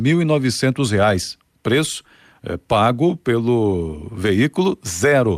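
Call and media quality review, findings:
No findings: the call and media quality review turns up no faults in this speech audio.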